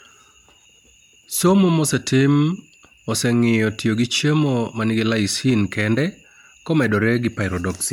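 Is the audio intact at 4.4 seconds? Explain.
No. At 4.4 s, as throughout the speech, there is swirly, hollow smearing with blurred consonant attacks, likely generation loss from around ten MP3 re-encodes, consistent with 128 kbit/s. Each pass re-quantises on a shifted frame grid. A spectrogram shows accumulating holes and nothing above 19.9 kHz.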